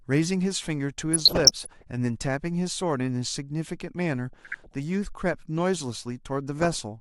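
Three bursts of DAB burbling break into the speech, from 1.14 to 1.83 s, 4.33 to 4.74 s and 6.59 to 6.80 s. Weak reception lets bit errors slip past error correction into the MP2 data, so corrupted samples put short noise blips in single sub-bands and corrupted scale factors make sub-bands leap in level for up to a frame. The result is a burbling of noise blips laid over the speech, not the silent gaps of a dropout. The last burst sounds denser, which points to a higher error rate, near 0.7 percent.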